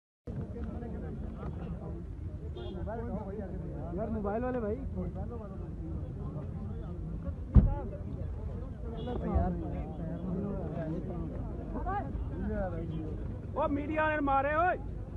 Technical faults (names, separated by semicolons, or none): none